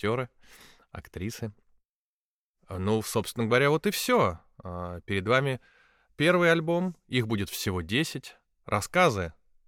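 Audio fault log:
No fault can be heard anywhere in the audio. Nothing in it calls for a timed entry.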